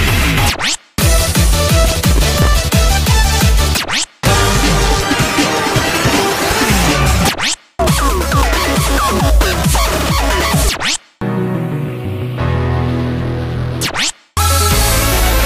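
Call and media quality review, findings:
Processor overload crackle, 1.85–2.47 s and 5.68–6.20 s: CPU repeatedly missing deadlines on very short buffers, a millisecond or two each. Stale audio replayed with hard edges, heard as gritty crackle bursts.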